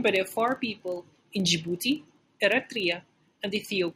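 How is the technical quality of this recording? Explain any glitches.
The recording is marred by one fault running through the whole speech clip. Filter restarted on every block, from start to finish: a processing filter forgets its state at each block boundary and begins again from silence, so every block opens with a small transient. Here those restarts arrive 25 times a second, which fits blocks of about 40 ms. They merge into a steady 25 Hz buzz under the voice, louder when the speech is louder and fading in the quieter moments.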